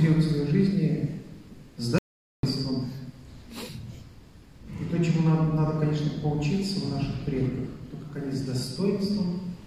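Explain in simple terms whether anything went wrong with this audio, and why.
An audio dropout to silence hits at 1.98 s. Everything goes dead for 0.45 s, until 2.43 s, likely because the input briefly cut out.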